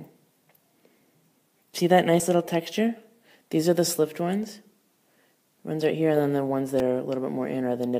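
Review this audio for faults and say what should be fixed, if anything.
Two abrupt skips occur, at 2.2 s and 6.8 s, each heard as the sound jumping ahead by roughly 20 ms with no gap of silence. The likely cause is a dropped buffer (overrun): the capture side fell behind, the hardware overwrote unread samples, and the surrounding audio was spliced together. On a waveform each shows as a sudden discontinuity, and on a spectrogram as a thin full-band vertical line. Giving the capture thread higher priority or a larger buffer would prevent it.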